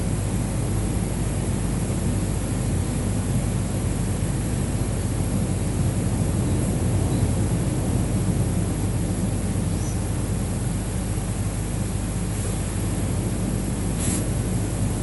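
Throughout the speech, the top end stops dead at 11.4 kHz and a rough, fluttering noise clings to voiced sounds. This is likely Dolby Digital compression at a low rate near 64 kbps, with empty frequency lines filled by dither noise rather than MP3's chirpy swirls.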